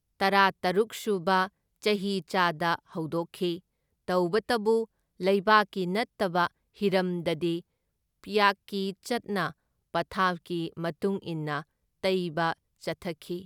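No technical fault can be heard anywhere in the speech recording, which stays continuous and undisturbed throughout.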